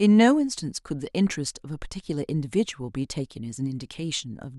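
Speech recording, no technical faults detected anywhere in the clip.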